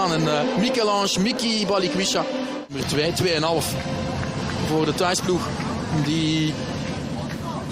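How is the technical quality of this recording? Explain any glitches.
No glitches or technical faults can be heard anywhere.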